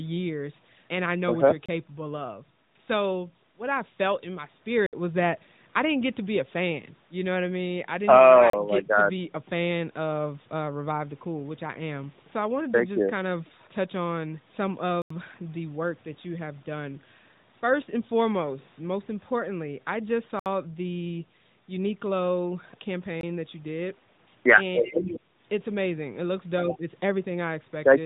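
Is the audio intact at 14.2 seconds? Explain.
Yes, the audio is intact at 14.2 seconds, with no dropout, glitch or other fault at that moment.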